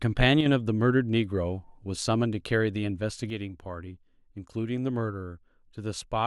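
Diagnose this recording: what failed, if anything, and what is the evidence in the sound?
The speech level falls abruptly by about 6 dB twice: briefly from 0.41 to 0.46 s, then from 3.3 s to the end. The cause is likely one channel dropping out, as from an intermittent analogue connection. Summed to mono, the shared signal halves.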